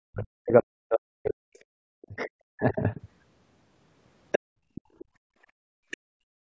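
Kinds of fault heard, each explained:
Speech suppressed in double talk: from 0.11 to 2.83 s the talker's speech dips by as much as about 40 dB, likely because both sides spoke at once and the echo canceller cut both.
Other side's voice leaking through: brief scraps of a second voice at 2.7, 4.32, 4.75, 4.99 and 5.91 s, likely residual loudspeaker echo, mostly about 20 dB below speech, near 4.32 s only about 5 dB.
Background gated by the echo canceller: from 4.39 s to the end the room sound drops by up to about 35 dB while the loudspeaker plays.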